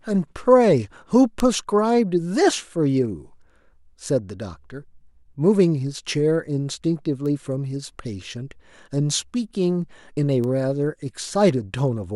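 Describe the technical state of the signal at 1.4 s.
At 1.40 s the signal carries a bit error spike: a single sharp tick lasting about three samples, peaking at about -6 dBFS. It comes from a flipped bit in a stored or transmitted sample word. The affected values jump by a power of two and then fall straight back to the true waveform. Because the excursion has nothing to do with the speech around it, the click is broadband and abrupt rather than tonal.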